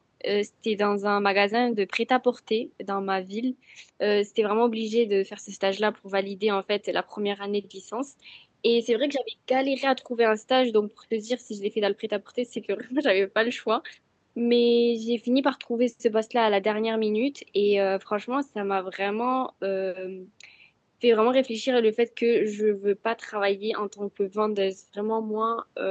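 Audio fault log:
No faults found; the speech passed through a WebRTC call path, and its top end stops at 8 kHz, which fits an Opus stream at around 64 kbps.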